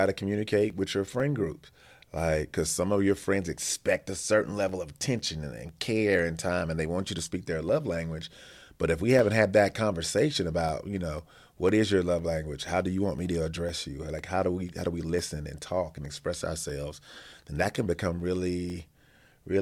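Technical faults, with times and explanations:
0.2 to 19.2 s, periodic USB or driver dropouts: about forty tiny gaps of roughly a millisecond, each filled with silence, as something repeatedly stalls the audio driver, heard as ticks every 0.5 s under the speech, a strict regularity that sets them apart from random clicks.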